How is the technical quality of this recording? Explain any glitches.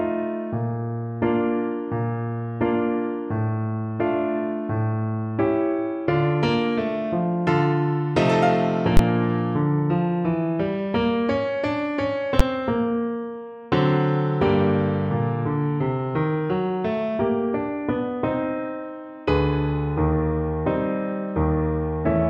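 Two sharp glitches affect the recording. Invalid numbers at full scale occur at 8.97–8.99 s and 12.40 s: a calculation produced invalid values that pinned the output at one extreme value for one processing block, which fits blocks of 1024 and 512 samples, heard as loud bangs.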